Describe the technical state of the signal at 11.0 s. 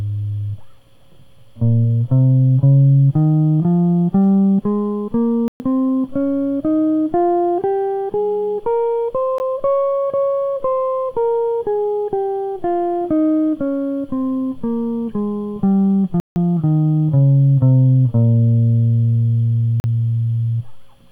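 At 11.0 s the music plays through intact, with no dropout, click, distortion or other fault audible at that moment.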